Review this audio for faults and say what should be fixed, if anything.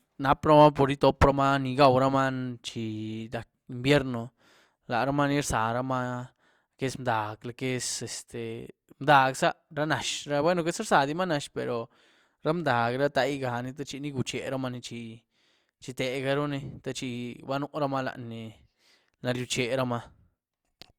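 Nothing to fix: no faults found in the speech recording.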